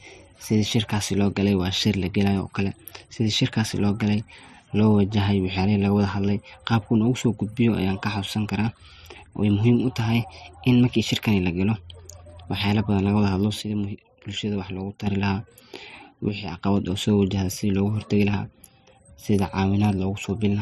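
At 13.62–15.07 s and 16.29–16.58 s, the speech abruptly falls about 6 dB, leaving a squared-off dip in the waveform envelope. The likely cause is that one channel drops out.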